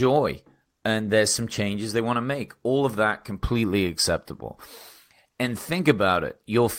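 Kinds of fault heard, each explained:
No technical faults can be heard anywhere in the speech recording; the signal stays continuous and stable throughout.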